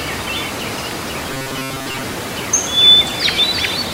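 From 1.30 to 2.03 s there's robotic sound from repeated short buffers: about 7.5 ms chunks likely looped, roughly most of it, leaving a rigid 133 Hz metallic buzz.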